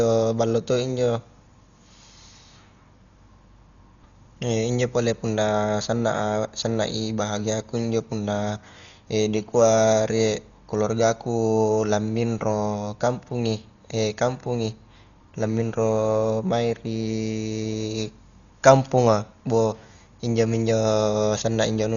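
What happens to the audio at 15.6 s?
At 15.6 s the speech sounds dull, with nothing above 7 kHz and a rough, fluttering noise around tones, as it does throughout the clip. The likely cause is Dolby Digital compression at around 40 kbps: starved frequency lines get no mantissa bits and are filled with dither noise.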